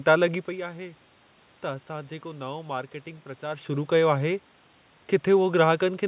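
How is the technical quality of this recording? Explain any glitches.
Nothing here counts as a glitch: the room noise belongs to the recording itself, the level shifts near the start and again a little past the midpoint are just the talker moving relative to the microphone, and the telephone-like top end that stops at 4 kHz is what a G.711 call path normally gives you.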